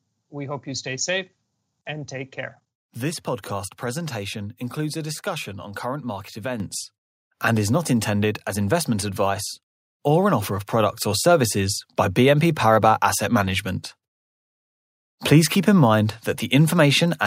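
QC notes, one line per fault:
6.6 s, microphone volume stepped up: right after "discussion on current market" the input volume was raised in one step, so voice and background noise jump about 7 dB together and stay there. A talker getting louder would leave the background unchanged.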